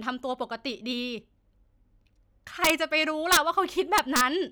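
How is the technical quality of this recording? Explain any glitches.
Integer overflow spoils three loud moments in the speech, around 2.65 to 2.70 s, 3.32 to 3.37 s and 3.98 to 4.21 s. Peaks pushed about 2 to 4 dB past the integer limit wrap to the opposite sign instead of clipping, giving harsh cracks far sharper than ordinary clipping.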